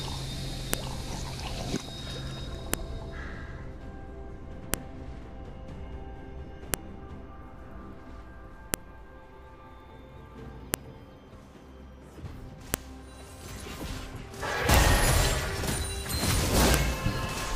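Separately saved two-second pieces were joined without stripping their WAV headers, so those header bytes play as samples: a file header played as audio. The result is a sharp, loud click every 2.0 s, from 0.74 s through 16.74 s, regardless of the surrounding sound.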